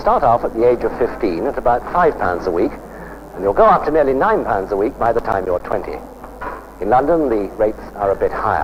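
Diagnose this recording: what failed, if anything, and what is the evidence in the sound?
A playback fault from the disc: CD scratch ticks. Between 4.79 and 5.99 s, ten evenly spaced ticks, about eight per second, each at most around 10 ms. Their strict spacing, one per rotation, sets them apart from random digital clicks or buffer dropouts.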